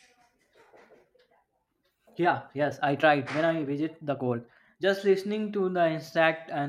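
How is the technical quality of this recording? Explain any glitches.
The speech has one fault. From 0.0 to 4.84 s there is a time-stretched section. The pace runs 1.52 times fast, then drops abruptly to normal. Pitch stays unchanged. Software likely squeezed the passage by dropping short slices, so it sounds rushed.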